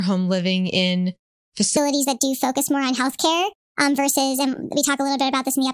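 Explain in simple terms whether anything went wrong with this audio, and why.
Something goes wrong at 1.77 s and lasts to the end at 5.73 s. From that point the speech suddenly sounds high and rushed. This is a wrong sample rate fault. The audio is played back faster than it was recorded, with no correction. The change fits sound recorded at 22 kHz but played at 32 kHz. So everything runs 1.45 times too fast, and the pitch jumps up by about 6.5 semitones.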